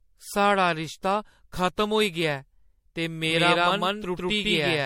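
Repeated lossy re-encoding, likely several MP3 passes at around five generations, runs through the whole speech clip. It leaves generation loss: a swirly, hollow, smeared texture with blurred consonant attacks and nothing above 16.5 kHz, which fits a 64 kbit/s MP3 chain.

From 3.30 s to the end, a second copy of the audio is mixed in, likely from a slower capture path. This doubled audio track trails by roughly 150 ms at about the same level, starts abruptly, and gives a dry, stuttering echo with no room decay.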